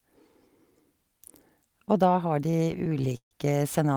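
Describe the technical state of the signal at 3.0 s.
At 3.0 s the speech is in the middle of repeated stalls (stutter), running from 2.51 to 3.33 s. Packets arrived late, so the jitter buffer kept emptying. Across twelve stalls the receiver stretched the last sound for 275 ms in total, with the longest hold at 142 ms, padding about a third of that stretch. Nothing is missing, so the speech drags and hiccups rather than dropping out into silent or clipped packet-loss gaps.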